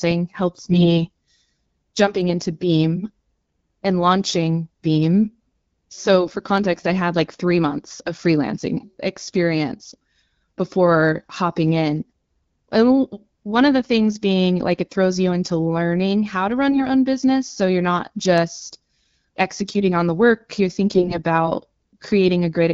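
AMR bit errors at 0.70–0.91 s, 16.70–16.87 s (between "learning how to run" and "own business"), 18.98–19.17 s (after "you're not just", before "executing on the work") and 20.92–21.19 s (after "on the work you're") flip the weakly protected bits of the wideband frames, misplacing excitation pulses, so the speech briefly turns hoarse and gargly.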